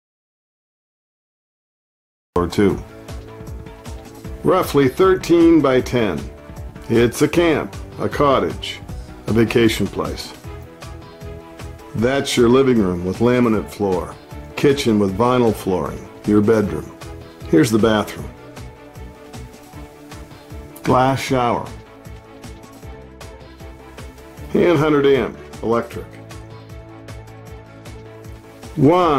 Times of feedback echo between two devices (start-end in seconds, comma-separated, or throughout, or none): none